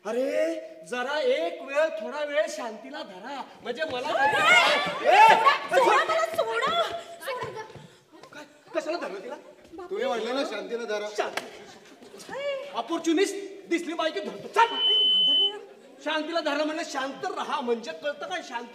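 At 14.59 s a loudspeaker feedback squeal starts. A microphone is hearing its own loudspeaker, and the loop gain passes one at 3 kHz. The tone swells within about a third of a second. It peaks roughly 5 dB above the sound. It stops at 15.58 s.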